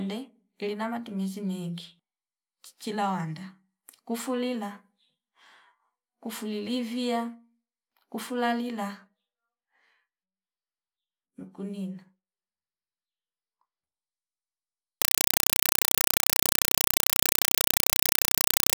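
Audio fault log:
15.02–18.77 s: compressed stream played as audio. The speech gives way to very loud, chattering static: 4 ms noise bursts separated by silence, repeating 31.25 times a second. This pattern fits an undecoded AC-3 (Dolby Digital) stream whose frames are being reproduced directly as PCM samples.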